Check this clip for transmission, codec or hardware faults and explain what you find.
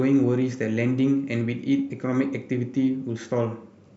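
No transmission, codec or hardware faults are audible here.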